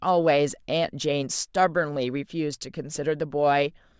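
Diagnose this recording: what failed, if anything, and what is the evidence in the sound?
Nothing in this recording points to a failure at any stage of the chain. The speech has no audible fault to diagnose.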